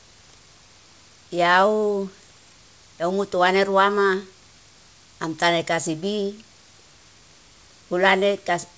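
No technical faults are audible.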